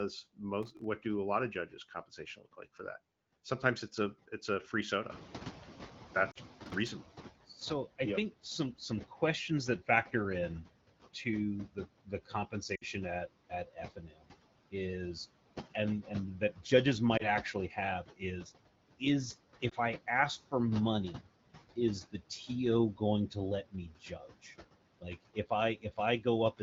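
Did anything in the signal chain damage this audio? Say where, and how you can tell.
Yes. The call-processing noise suppressor cuts steady noise by about 17 dB throughout. Its frame-by-frame gain leaves a residue that dips between phrases and swells under speech.

The same suppressor misreads speech as noise at 0.37–2.8 s, 7.98–10.13 s, 11.14–14.74 s and 15.74–26.61 s. Quiet endings and consonants drop by up to about 18 dB and sound swallowed.

Processor overload crackle in the driver or buffer stage appears at 0.63–0.84 s and 6.66–6.92 s. The processor misses a string of sub-millisecond buffer deadlines, and each miss leaves a silent gap, so the sound turns gritty and torn.

The noise suppressor is catching up after "a it's a free", when the room noise rises about 14 dB near 5 s. Its estimate lags, so the noise comes through with less reduction at first and then takes about 2.2 s to sink by about 12 dB.

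Lost AMR speech frames in the network hit at 6.31 s (about 40 ms), 12.75 s (about 60 ms), 17.17 s and 19.69 s. The AMR-WB decoder conceals each gap with fading repeated parameters, so the single-frame losses are a brief warble or dip, while the longer runs drop to near silence within two frames.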